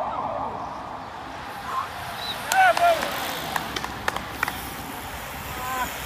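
Nothing is technically wrong with this audio clip.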